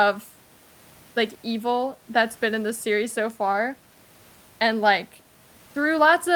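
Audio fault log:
No faults detected.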